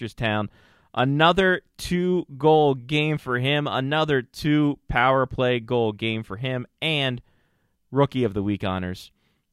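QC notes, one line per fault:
Nothing to flag here: no faults turned up anywhere in this speech clip.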